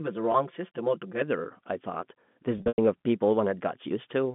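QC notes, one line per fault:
0.00–1.21 s, channel delay (comb filtering): the sound is hollow and phasey, a colour that clears after 1.21 s. One channel runs roughly 5 ms behind the other, and when the two are folded to mono, the shared content cancels at evenly spaced frequencies. This cuts fixed notches starting near 100 Hz and repeating up the band.
0.32 s and 2.58–2.78 s, packet loss with pitch repetition: at 0.32 s there is a brief buzzy hold of about 20 ms, which fits one lost packet bridged by repeating the last pitch cycle. From 2.58 to 2.78 s, about 160 ms is lost across a 200 ms span, with the longest gap near 100 ms. There the repeated cycle buzzes, fades toward silence, and cross-fades back into the sound.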